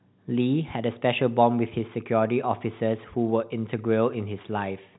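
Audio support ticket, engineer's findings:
Findings: no faults found; speech is band-limited to about 3.9 kHz, as expected for G.711 telephone coding.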